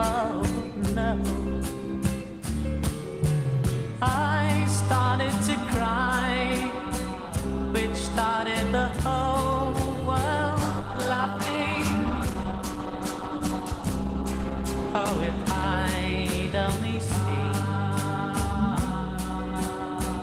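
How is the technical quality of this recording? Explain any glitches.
Quality is uneven because of one glitch, a call bitrate drop. From 10.53 to 15.73 s, the sound turns rough and muffled for about 5 seconds. The bandwidth estimate fell, so the encoder coded more coarsely and trimmed the highs. This fits a drop from 32 to 14 kbps.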